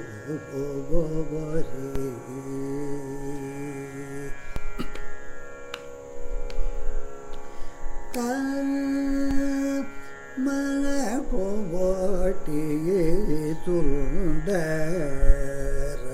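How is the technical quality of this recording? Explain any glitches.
Three DC steps break up the recording, at 1.96 s, 4.56 s and 9.31 s. At each one the waveform's zero line jumps suddenly, then decays back as a 5 Hz high-pass drains the offset. Each step is heard as a low thump or click, while the sound itself carries on unchanged.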